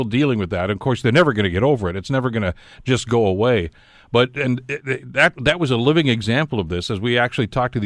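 No technical faults can be heard anywhere in the speech recording; the signal holds steady throughout.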